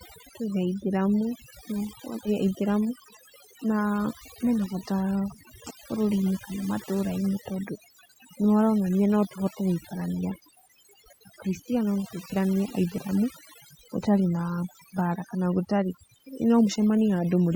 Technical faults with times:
0.00-17.56 overdone noise removal

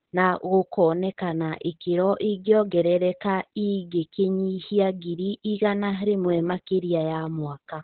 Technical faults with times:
0.00-7.84 Opus voice compression

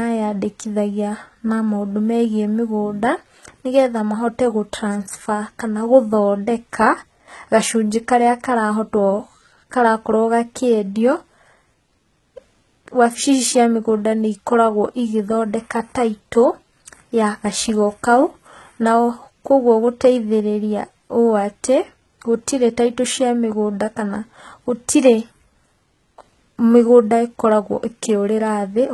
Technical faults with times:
0.00-28.94 HE-AAC compression

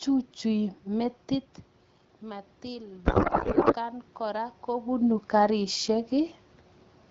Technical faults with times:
2.21-4.96 automatic gain rising
3.05-3.75 codec payload misread

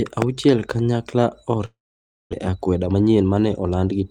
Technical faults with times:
1.65-2.35 long network dropout
2.48-4.06 jitter buffer speed-up

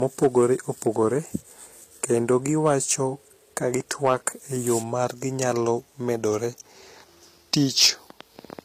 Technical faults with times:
0.00-8.65 low-bitrate audio saved at a high bitrate
0.03-1.07 hard clipping
2.04-2.93 hard clipping
3.57-4.28 hard clipping
7.54-7.88 hard clipping

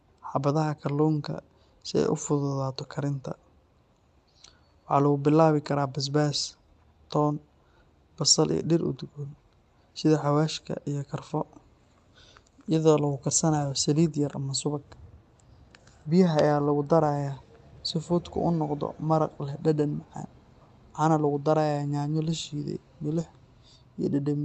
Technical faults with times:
none

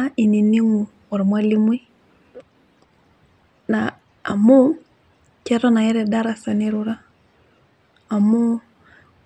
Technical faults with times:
none

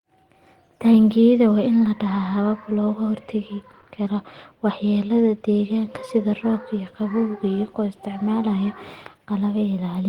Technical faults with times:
none

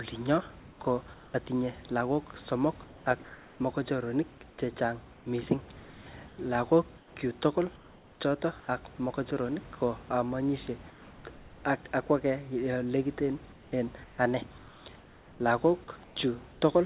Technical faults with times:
0.60-1.34 comfort noise in place of the background
2.86-3.60 comfort noise in place of the background
4.50-5.26 comfort noise in place of the background
6.28-8.68 comfort noise in place of the background
10.90-11.64 comfort noise in place of the background
13.52-16.62 comfort noise in place of the background

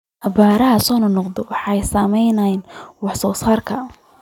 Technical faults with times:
none

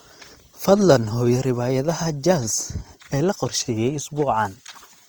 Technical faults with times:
0.00-5.08 Opus compression

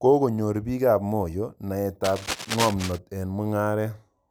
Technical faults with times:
2.04-2.99 cable scratch noise

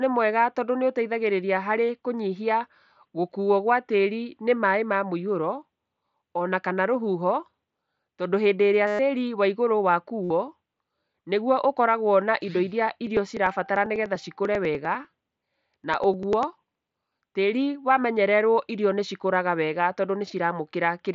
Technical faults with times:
8.87-8.99 concealed Bluetooth headset packet loss
10.23-10.30 concealed Bluetooth headset packet loss
12.97-17.22 periodic USB or driver dropouts

